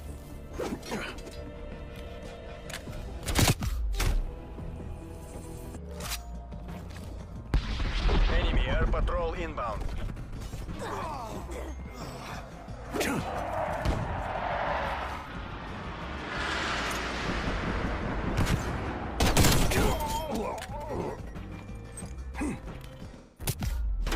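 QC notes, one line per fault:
10.21 s and 15.16 s, AAC frame loss with concealment: about 85 ms smeared, phasey patches, consistent with two lost frames filled from the last good spectrum with scrambled signs.
23.17–23.54 s, AAC frame loss with concealment: a longer smeared stretch of about 0.37 s where the decoder repeats the held spectrum while fading its energy, so the sound thins out.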